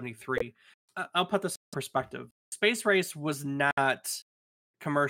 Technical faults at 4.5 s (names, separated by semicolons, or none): none